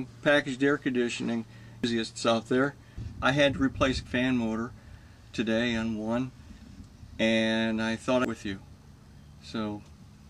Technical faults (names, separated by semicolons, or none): damaged data in a compressed stream